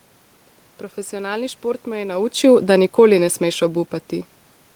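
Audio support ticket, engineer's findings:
Automatic gain falling, 2.03–3.69 s, starting just after "šport me". AGC judged the input too loud or its background too strong and pulled gain down gradually, about 3 dB over 1.7 s. Level sinks steadily, room noise dropping with it. Talker movement near 2 s overlaps the onset but doesn't account for the background falling too.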